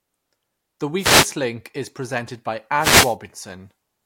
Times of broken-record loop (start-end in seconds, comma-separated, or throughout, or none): none